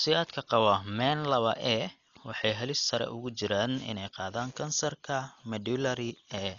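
From start to finish the speech sounds dull and boxed-in, with nothing above 7 kHz, and a rough, fluttering hiss clings to the voiced sounds. This is heavy damage that likely comes from Dolby Digital compression at a very low bitrate, which fits a stream of about 40 kbps. The encoder has cut the band and left many frequency lines without mantissa bits. The decoder then fills those gaps with noise, which produces the grainy flutter.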